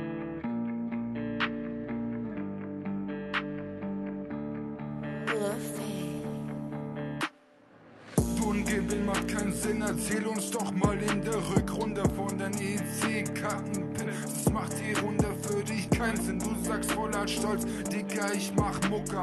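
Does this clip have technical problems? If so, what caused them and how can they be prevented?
No, this clip has no technical problems, so there is nothing to prevent.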